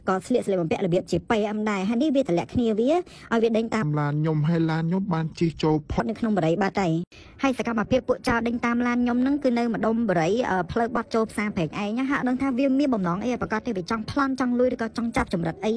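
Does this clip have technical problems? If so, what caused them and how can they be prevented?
Yes. A wrong sample rate runs from 3.82 to 6.0 s. The samples are played out more slowly than they were captured, with no rate conversion, so the sound drops about 6.5 semitones in pitch and slows to 0.69 times its proper speed, both by the same ratio. The sound turns low and sluggish. That ratio fits material recorded at 32 kHz being played back at 22 kHz. To prevent this, have the playback path read the stream's true sample rate and resample whenever the device runs at a different one.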